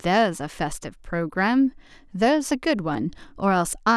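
No technical fault can be heard anywhere in the speech recording.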